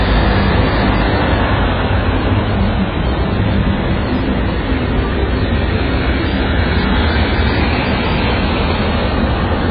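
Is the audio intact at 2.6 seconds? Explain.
No. At 2.6 seconds, as throughout the clip, the sound is dull and smeared, with nothing above 5 kHz and a warbling, fizzy texture. This is likely heavy AAC compression: the encoder discards and coarsely quantises spectral detail, consistent with a bitrate near 12 kbps.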